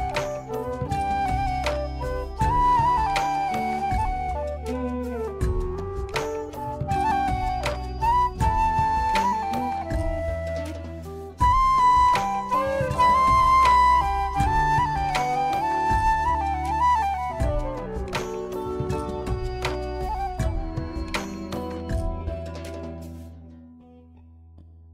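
Nothing in the recording stood out as a technical problem on listening.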